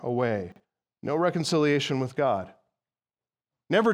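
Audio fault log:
0.52–0.6 s chunks out of order: a 40 ms chunk plays one chunk late, after its successor. Nothing is missing, but the sound jumbles briefly across three hard joins.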